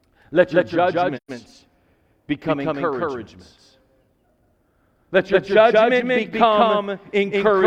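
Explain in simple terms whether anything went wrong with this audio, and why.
Throughout the speech, every sound repeats at equal loudness about a fifth of a second later. This is a doubled audio track, likely from the audio being captured twice.

From 1.17 to 1.31 s the sound softly fades into a silent gap and back. This is AAC frame loss with muting: a 128 ms piece was lost and replaced with silence.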